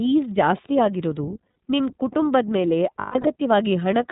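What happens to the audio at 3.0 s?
At 2.99 s, lost iLBC frames begin and run to about 3.28 s. The decoder fills each gap by repeating the last pitch cycle blended with noise, so the sound turns into a held, faintly buzzy vowel before clean audio returns almost immediately. About 180 ms is missing, scattered across 240 ms, which points to six lost 30 ms frames, with the longest gap around 150 ms.

Underneath that, the whole clip carries the iLBC codec's narrowband character. Nothing above 4 kHz survives, and each frame's excitation is coded independently, giving the speech a plainly audible rough, slightly synthetic edge that fits the 13.33 kbps mode with 30 ms frames.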